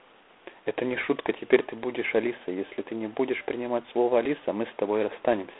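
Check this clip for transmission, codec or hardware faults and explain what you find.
One codec fault runs through the whole speech clip. G.726 ADPCM, throughout: each sample is coded as a few bits of error against a running prediction. The harsh, rasping hiss that tracks the speech level fits the 24 kbit/s mode. The band sits near 300 Hz to 3.5 kHz, with nothing above 3.9 kHz.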